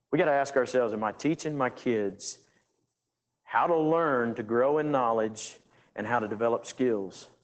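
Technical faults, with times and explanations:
Throughout, Opus voice compression: the speech sounds muffled, slightly hoarse and faintly robotic, the plainly audible damage of a linear-prediction voice coder working at a low rate, which fits a SILK-mode stream at roughly 12 kbps. The excitation is coded coarsely, so the voice loses its natural grain. A spectrogram shows nothing above 9.1 kHz, a flat ceiling across the whole clip, with smeared, blocky harmonics consistent with 20 ms frames.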